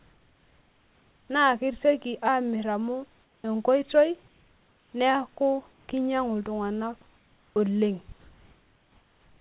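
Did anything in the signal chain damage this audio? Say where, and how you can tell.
Yes. Comfort noise replaces the background in the pauses at 3.24–3.44, 4.28–4.92, 5.72–5.88, 7.16–7.56 s and from 8.2 s to the end. In each gap the room's textured noise turns into a smooth, featureless hiss, about 1 to 5 dB quieter, and in the first four it returns when speech resumes. This is likely discontinuous transmission in the call processing: the sender went silent when no speech was detected and the receiver synthesised noise in its place, all within a band that stops at 4 kHz.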